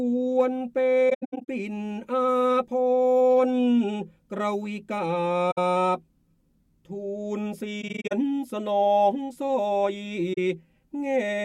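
The audio drops out four times with AAC frame loss with muting, where lost frames are decoded as silence and the overlapping windows taper each gap in and out. At 1.10–1.48 s, about 277 ms of soft-edged holes are scattered across the span, the longest run about a tenth of a second. Shorter gaps follow at 5.51–5.58 s (64 ms), 7.81–8.12 s (171 ms, broken up), and 10.33–10.38 s (43 ms).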